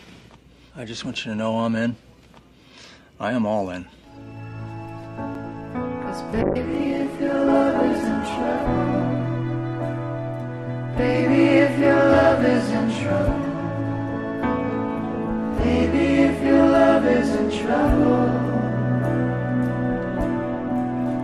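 The audio has two faults. At 5.35 s a block of digital silence lasts about 5.8 ms, which fits one unfilled 256-sample buffer. The signal drops straight to zero and back with no fade, so it is heard as a single tick, not the smeared, filled-in gap that packet-loss concealment would leave. From 6.43 s to 8.75 s a call bitrate drop makes the sound rough and muffled, with the highs cut away. This is consistent with the encoder falling from about 96 kbps to about 12 kbps for roughly 2.3 s. Because the full bandwidth returns afterwards, it is a temporary rate cut and not a narrowband line.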